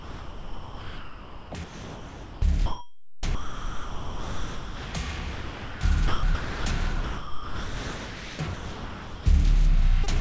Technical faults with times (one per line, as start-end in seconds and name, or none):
0.00-4.94 sound chopped by the voice detector
5.33-5.81 sound dropped by the voice detector
6.08-6.65 sound chopped by the voice detector
7.04-9.26 sound chopped by the voice detector
10.04-10.09 short concealed packet loss